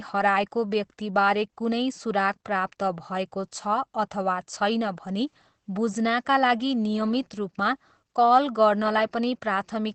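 Throughout the speech, the sound is muffled and slightly hoarse and robotic, with nothing above about 8.6 kHz. This is plainly audible Opus voice compression: the SILK coder in wideband mode models the voice coarsely, which fits a low bitrate around 12 kbps.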